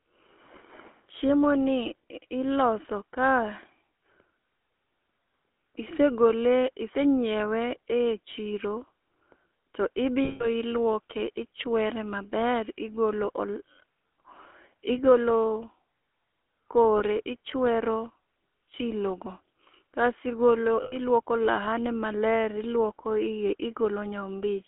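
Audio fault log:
Throughout: GSM full-rate codec. The speech has that plainly audible buzzy, gravelly grit. The encoder models the vocal tract and drives it with a sparse train of regularly spaced pulses, so the fine texture of the excitation gets thrown away. The damage fits the old 13 kbps full-rate coder. The line band runs only from about 250 Hz to 3.4 kHz, which leaves it thin and boxy with no top end.
10.24–10.47 s, 16.98–17.01 s, 20.82–20.96 s: lost GSM frames. Each time the decoder lost data and kept replaying the last good frame, so the sound hangs as a rough, metallic ring instead of carrying on. The dropouts run about 160 ms, 20 ms and 100 ms. The 17.0 s one is just a brief rasp.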